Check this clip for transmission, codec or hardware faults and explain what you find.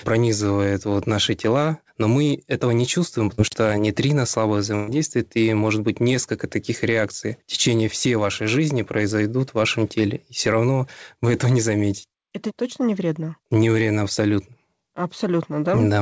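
Two transmission faults are audible, both losses in a call path whose audio stops at 8 kHz, which fits a G.722 wideband codec.

At 3.35 to 3.40 s, just after "мы этого не чувствуем", a brief smear blurs the sound. This is short concealed packet loss: about 30 ms never arrived, and the receiver extended the preceding sound to bridge it.

At 4.75 to 4.90 s, after "что нейтрино слабо", the sound holds and fades, then resumes at "и может быть несколько". This is a burst of packet loss: about 120 ms was lost, so the concealment stretched the last sound while turning it down, and the audio from that stretch is gone.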